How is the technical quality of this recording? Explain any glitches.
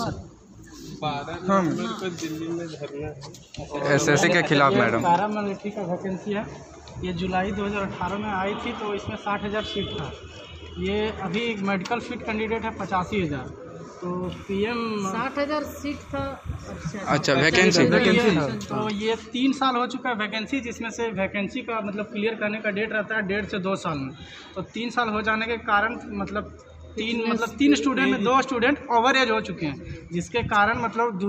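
The recording has two kinds of fault: five brief jumps where compressed frames were skipped, and a stretch of timecode bleed.

At 4.22, 8.87, 11.38, 21.15 and 28.04 s the audio jumps abruptly forward, with a short blip at each join. This is compressed frames skipped: whole frames were missing or rejected by the decoder. The 26.1 ms frame length points to roughly two, one, three, one and two frames lost, about 50, 30, 70, 30 and 50 ms of audio.

From 14.24 to 19.23 s a steady chirping warble sits about 25 dB below the sound, flipping between roughly 1 kHz and 2 kHz. This is timecode bleed: a 29.97 frames-per-second linear timecode signal, a square wave, leaked in from a neighbouring track or cable.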